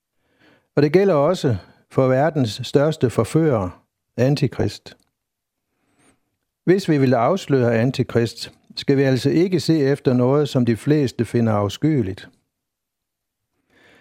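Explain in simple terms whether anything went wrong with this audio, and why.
DAB burbling breaks into the speech four times: 1.29 to 1.42 s, 4.53 to 4.71 s, 10.08 to 10.18 s, and 12.09 to 12.31 s. Each is short and sits over the talking. The digital radio signal was weak, so a small share of the data arrived damaged and slipped past the receiver's error correction. Individual frequency bands then got short blips of noise, which the ear hears as the burbling.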